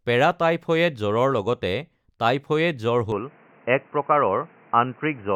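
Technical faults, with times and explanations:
3.12–5.36 s, input switched to a poorer device: from 3.12 s to the end the speech abruptly turns dull and boxy, with nothing above 3 kHz and a new noise floor about 35 dB down, but no gap or level jump. A likely switch to a narrower-band microphone.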